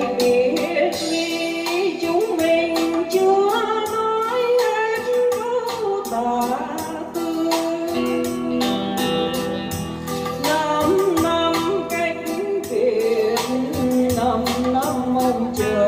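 No technical faults can be heard anywhere in this clip.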